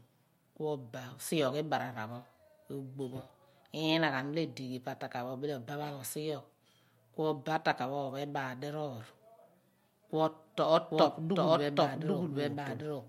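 From 10.92 s to the end, a doubled audio track: a same-level copy trails about 0.7 s behind, likely a second capture path. Spectrogram shows duplicated, offset speech patterns.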